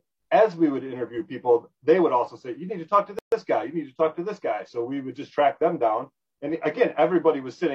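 At 3.19 s a gap at a join of encoded pieces opens: a 135 ms gap, to 3.32 s, from untrimmed encoder delay and end padding between separately encoded sections. Unlike a dropout, nothing is lost; the sound resumes where it stopped, edges smeared.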